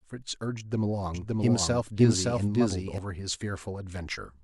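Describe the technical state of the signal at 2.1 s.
At 2.1 s the speech is carrying a doubled audio track, running from 1.14 s to 2.98 s: a second full-band copy at roughly the same level trails by about half a second, likely from a slower capture path. It sounds like a dry, overlapping repeat; the waveform shows duplicated envelopes, and the spectrogram shows offset, identical patterns with abrupt edges.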